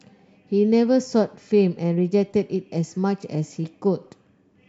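Nothing in this bit of speech stands out as a technical fault at any point, so there's nothing to flag here.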